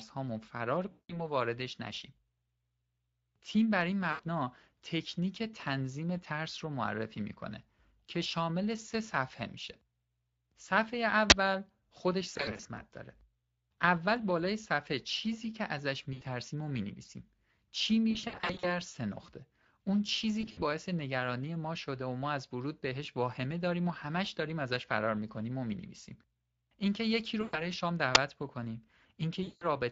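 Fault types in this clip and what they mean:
Speex codec: a low-rate CELP speech coder, consistent with a bitrate around 20 kbps, runs throughout, leaving the speech plainly hoarse and noisy the whole way.
VoIP packet loss concealed by the speech codec: missing packets are rebuilt from the last pitch and filter, so eight dropouts become fading buzzy stretches, the longest near 18.1 s.
Uninitialised buffer: blocks were played before audio was written into them, so stale memory came out as short, loud digital noise bursts at 11.30 to 11.32 s and 28.15 s.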